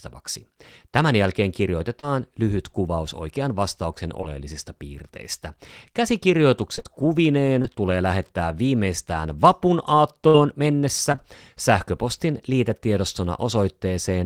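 A brief smear at 1.99 to 2.06 s and another just after "lyhyt kuvaus oikean vastauksen" at 4.21 to 4.30 s are short concealed packet loss: about 40 ms and 20 ms of speech arrived too late, and the decoder extended the preceding sound to cover the gaps. Choppy, robotic stretches from 6.76 to 7.66 s, just before "tulee lähettää viimeistään vapun", and from 10.28 to 11.20 s, right after it, are repeated packet loss. Four and then three successive dropouts, the longest 22 ms and 57 ms, were each patched from the preceding audio.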